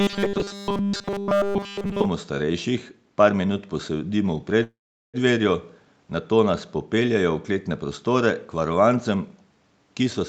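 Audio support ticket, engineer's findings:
Robotic sound from repeated short buffers, 0.00 to 2.06 s. Speech turns into a rigid metallic buzz at 200 Hz, which fits a 5 ms buffer being looped. Likely cause is audio arriving too seldom at the playout side. The whole stretch is repeated material rather than new audio. The buzz only roughly follows the speech contour.

Call audio freeze, 4.63 to 5.17 s. Sound holds briefly, then drops to silence for 400 ms. About 0.5 s of fill in total. Likely cause is delayed packets draining the jitter buffer. Playback then resumes where it stopped. Nothing is lost, but latency grows by about 0.5 s from this point.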